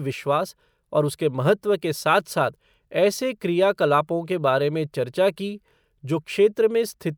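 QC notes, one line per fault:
Nothing stood out on listening to the speech in this clip.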